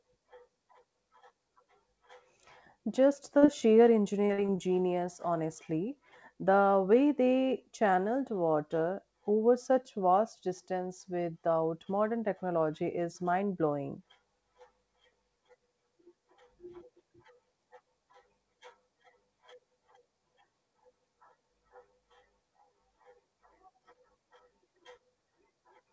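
Speech over a call link whose audio stops at 8 kHz, which fits a wideband codec such as G.722, suffers short concealed packet loss twice: about 40 ms of audio failed to arrive at 3.38 to 3.44 s, then about 20 ms at 3.46 to 3.50 s. The decoder extended the preceding sound across each gap, leaving a quick smear or wobble. Then, from 4.26 to 4.60 s, just before "genius honestly", repeated packet loss produces four gaps totalling about 120 ms, the longest 44 ms. With roughly a third of that stretch patched, the speech turns choppy.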